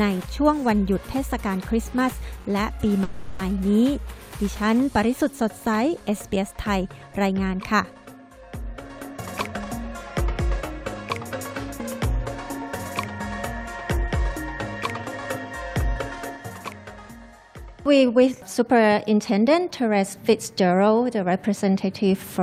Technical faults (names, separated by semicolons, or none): call audio freeze; jitter buffer speed-up